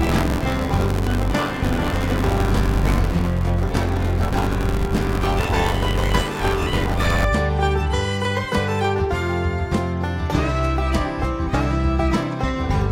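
Buffer tearing runs from the start to 7.25 s. A steady 86.1 Hz robotic buzz, which fits a 512-sample buffer, rides on the sound, with a fifth of each buffer replaying audio from about 20 ms earlier.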